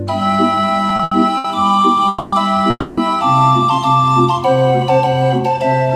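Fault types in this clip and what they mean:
Repeated stalls (stutter): from 0.89 to 1.46 s the sound keeps catching as packets arrive late and the buffer runs dry, four short waits, the longest about 80 ms, each papered over by stretching the last sound. About a third of that stretch is filler, though nothing's actually lost.
Call audio freeze: twice, at 2.08 to 2.34 s and 2.70 to 2.99 s, the sound hangs and the last bit carries on as a fading buzz or hiss for about 240 and 270 ms, the second dropping to brief silence, likely from packets held up in transit. Then it picks up where it stopped.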